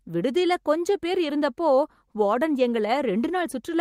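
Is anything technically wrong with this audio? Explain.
No, nothing technically wrong stood out on listening to this speech clip.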